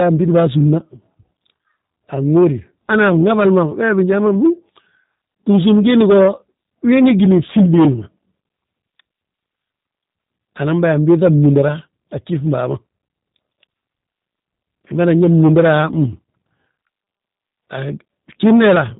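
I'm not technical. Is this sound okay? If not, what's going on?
No, not quite. The whole clip has gone through the G.729 codec, a squeeze-it-small format common on internet phone calls. Rather than keeping the actual sound, it rebuilds the speech from a rough model of the voice, a few times every hundredth of a second. Nothing above about 3.8 kHz survives, so it sounds muffled and phone-like, and the damage is plainly audible: a slightly rough, synthetic edge from start to finish.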